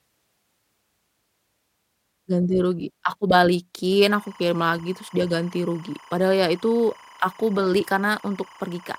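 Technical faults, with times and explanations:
4.08 to 8.99 s: timecode bleed, with 25 fps linear timecode leaking in from an adjacent line and warbling between roughly 1 and 2 kHz, about 25 dB under the speech.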